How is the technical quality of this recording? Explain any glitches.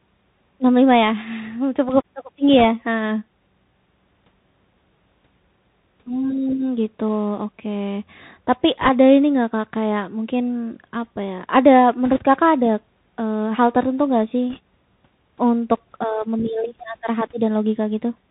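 The quality is poor, with two problems. Throughout, a Bluetooth CVSD headset codec, consistent with a 64 kbps link, codes one up-or-down bit per step and cuts everything above 4 kHz, leaving muffled speech, scratchy s sounds and granular hiss. Bit errors on a Bluetooth voice link, at an error rate of roughly 1.5 percent, occur at 2.59–2.65 s, 8.81–8.90 s just before "ini nggak", 12.06–12.18 s, and 14.50–14.59 s right after "hal tertentu nggak sih". Each flipped bit nudges the waveform slightly, so these bursts add brief rushing crackle rather than loud clicks.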